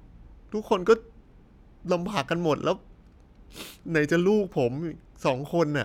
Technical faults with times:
none

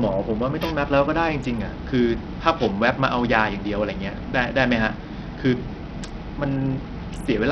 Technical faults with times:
0.00-7.51 Bluetooth SBC compression

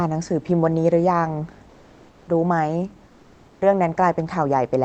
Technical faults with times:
1.69-2.27 comfort noise in place of the background
3.07-3.61 comfort noise in place of the background

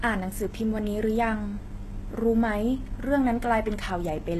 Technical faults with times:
0.00-4.39 HE-AAC compression

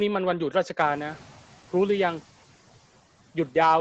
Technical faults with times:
0.79-1.48 noise suppressor catching up

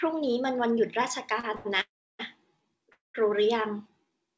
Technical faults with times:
1.40-1.67 short stall from a late packet
1.81-2.21 call audio freeze
2.92-3.16 call audio freeze

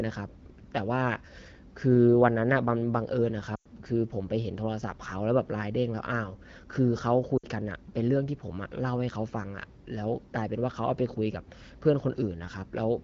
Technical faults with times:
3.56-3.67 lost AMR speech frames
7.37-7.46 lost AMR speech frames

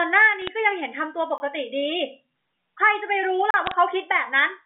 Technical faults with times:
0.42-0.48 bit errors on a digital phone line
1.38-1.40 block of digital silence
3.51-3.54 block of digital silence
3.66-3.74 bit errors on a digital phone line

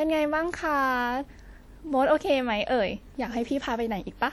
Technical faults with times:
0.00-4.32 WMA compression

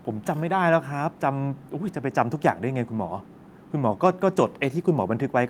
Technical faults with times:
none

